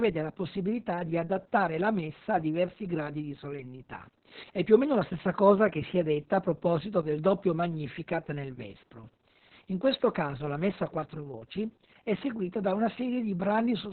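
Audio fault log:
throughout Opus voice compression: the speech sounds muffled, hoarse and faintly robotic, with nothing above 4.3 kHz. The SILK coder has cut the band to narrowband telephone width and coded the excitation very coarsely, which points to a bitrate near 6 kbps.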